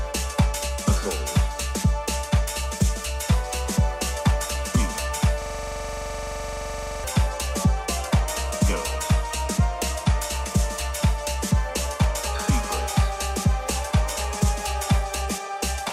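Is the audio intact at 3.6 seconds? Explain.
Yes, at 3.6 seconds the audio is intact, with no dropout, click, distortion or other fault to be heard at that point.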